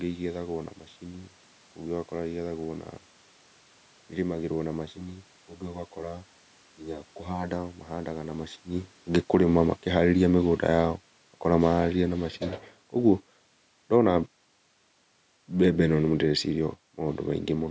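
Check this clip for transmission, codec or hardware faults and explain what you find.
Two faults are audible in this speech.

From 4.88 to 7.51 s, after "ĩrĩmagĩrwo na" and before "mahandaga na", channel delay causes comb filtering. One channel lags by about 10 ms. Summed to mono, this cuts evenly spaced notches from around 50 Hz upward. The voice sounds hollow and phasey.

From 9.17 to 12.33 s, the automatic gain falls. The control found the input too loud, or its background noise too strong, and lowered gain gradually, by about 6 dB. Voice and background sink together. The level change near 8.5 s is the talker moving.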